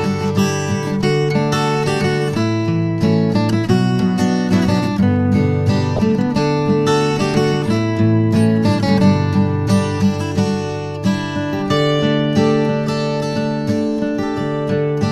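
A loud blip from 5.96 to 5.99 s: a corrupt frame decoded, where bit errors in a few compressed frames were played anyway, misplacing energy across frequencies.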